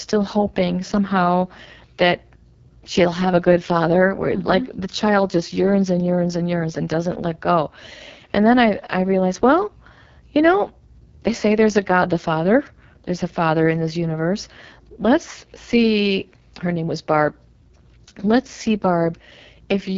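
Throughout, the speech sounds rough and raspy with nothing above 7.5 kHz: AMR wideband (HD Voice) coding at a very low rate, which fits 6.6 kbit/s.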